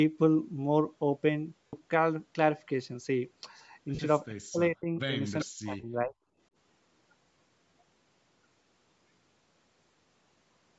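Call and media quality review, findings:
Bluetooth LC3 compression, throughout: grainy, breathy top on the speech, highs sounding noise-filled rather than real. The damage is plainly audible. Likely the LE Audio link at around 48 kbps in 10 ms frames, with the codec zeroing upper bands and filling them with noise. The call's mic processing cuts bass as normal, and nothing sits above 8 kHz.

Lost LE Audio frames at 1.67–1.73 s (60 ms, six frames' worth), 3.95–3.99 s (40 ms) and 9.91 s (20 ms). Brief noisy smears where the speech should continue, and the longest dips as it fades. The LC3 decoder is concealing by replaying the last spectrum with randomised signs, then attenuating.

Speech suppressed in double talk, 4.29–5.13 s and 5.44–6.15 s. The talker ducks, with about half a second affected in the first stretch and about 0.7 s in the second. The drops run about 30 dB and then about 40 dB deep. 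This is likely the echo canceller, which can't separate local speech from loudspeaker echo and suppresses both.

Echo leak at 5.40–5.45 s: a faint delayed scrap of the speech, about 20 dB under it and lagging by 388 ms. This is likely a residual from a speakerphone end whose canceller let some loudspeaker pickup through and sent it back.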